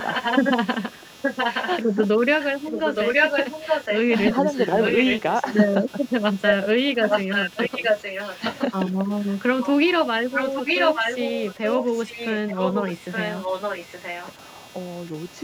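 Underneath the whole recording runs a faint scratchy buzz, pulsing at a few hundred times a second and sitting well below the speech. It rises and falls independently of the talker. That is computer activity noise: changing load on the processor, graphics card or mouse shifting the ground the audio circuit shares, so the machine's own activity leaks into the signal as a chirping buzz.

From the start to 5.45 s, a second copy of the speech trails the first by about 0.87 s, roughly as loud as the original. It returns from 6.37 s to 15.35 s, now somewhat quieter. This is an echo leak. Sound played from a loudspeaker on the far side reached its microphone, and that side's echo canceller likely failed to remove it, sending the speech back delayed.

Around those stretches the talker's level briefly sags. There is a dip of about 10 dB at 2.37 to 2.47 s. From 5.91 to 7.86 s there are scattered drops totalling around 0.4 s, the deepest near 15 dB. 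A slight dip follows at 8.85 s, then another of about 10 dB at 10.03 to 10.1 s. Each is speech suppressed in double talk. With both sides sounding at once, the canceller could not separate the talker from the echo and likely turned both down together.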